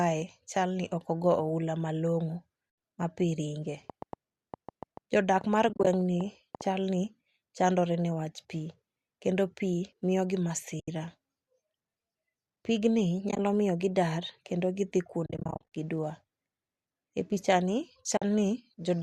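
At 2.70 s the speech drops into a brief soft-edged hole lasting 80 ms, just before "ma pii". It fades out and back in. This is AAC frame loss with muting: the decoder zeroed the missing frames' spectrum, and the overlapping windows smoothed the edges, which fits frames roughly 10 ms long.

From 3.90 to 6.62 s a train of clicks ticks over the speech, and through its pauses too. The clicks come at about 4.4 per second on an uneven pace, roughly fifteen of them, peaking at about 5 dB above the speech. They share much the same shape, likely from electrical interference or a faulty connection.

Inside that stretch, 5.69 to 5.87 s brings more muted frame loss. About 100 ms of sound goes missing in short scattered gaps, none much over 30 ms, so the speech flutters rather than stopping outright.

At 10.80 s a single 80 ms muted hole opens, with the same gentle fade out and in.

At 13.29 to 13.39 s, 60 ms vanishes in brief gaps of up to around 20 ms.

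Just after "kendo gidhi", from 15.26 to 15.66 s, comes the heaviest frame loss. About 300 ms is muted across nearly half a second, in dropouts up to around 40 ms, making the speech choppy and hollow.

At 18.17 s a final 50 ms soft-edged gap closes the pattern.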